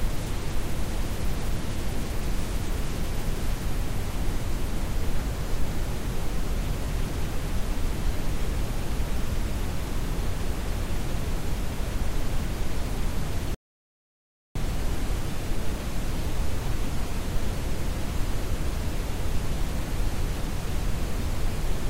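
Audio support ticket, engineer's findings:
Rebuffering stall at 13.55 s, lasting to 14.56 s: audio drops to silence for about a second, then picks up exactly where it left off. Playback buffer ran dry waiting on the download. Nothing lost, just roughly a second of dead air added.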